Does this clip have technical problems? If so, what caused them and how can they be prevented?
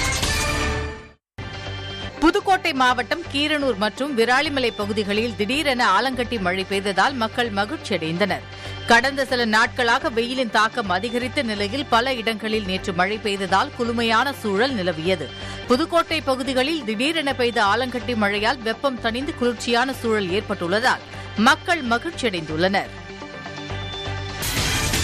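Yes. From 20.82 to 21.16 s a short burst of gritty crackle tears through the sound, made of tiny hard-edged dropouts to silence. This is processor overload crackle. The processor couldn't finish its audio buffers on time, and around seven deadlines were missed in close succession. The gap sizes suggest a buffer of about 3 ms, and each missed one left a sharp-edged hole. The crackle stops once the load eases. To prevent it, use a larger buffer or reduce the processing load during recording and playback.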